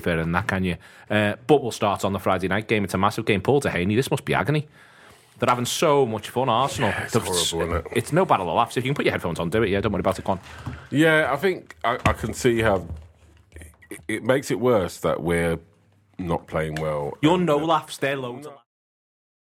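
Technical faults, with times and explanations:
No technical faults are audible.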